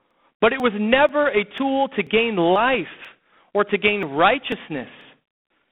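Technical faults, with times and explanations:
Throughout: G.726 ADPCM at 24 kbit/s. With only about three bits per sample to code the error of an adaptive predictor, a harsh, rasping hiss rises and falls with the speech level. The line passes roughly 150 Hz to 3.5 kHz, with nothing above 3.8 kHz.
0.11 to 5.5 s: periodic USB or driver dropouts, about ten of them, spaced 0.49 s apart. Each time, around 10 ms of audio is skipped outright, so the joined edges produce a regular tick or pop, heard only where speech is present.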